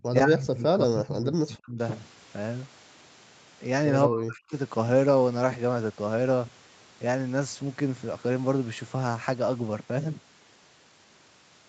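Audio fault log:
0.11 to 1.78 s and 4.07 to 4.55 s: speech suppressed in double talk. The speech sinks sharply, by about 40 dB at worst, through most of each span. Both sides were likely talking at once, so the echo canceller mistook this talker for loudspeaker echo and turned it down.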